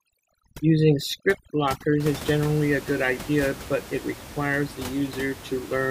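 From 0.0 to 2.0 s, overdone noise removal sets in: a noise reduction stage working far too aggressively suppresses individual frequency bands whenever their level sits close to its noise estimate, and the softer components of the speech fall into that range and are cut along with the noise. The gaps between words collapse into near silence dotted with twinkling specks, set against room noise sitting about 15 dB below speech.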